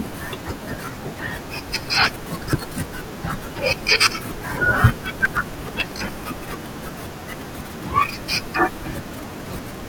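The processor fell behind its audio deadlines twice, leaving short buffers, each a few milliseconds long, that were skipped outright. This is processor overload crackle. From 2.04 to 2.83 s, dozens of dropped buffers punch hard-edged holes into the speech, heard as a gritty crackle riding on top. From 5.17 to 6.09 s a heavier run, around a hundred misses, tears the sound more densely before the load eases and the crackle stops.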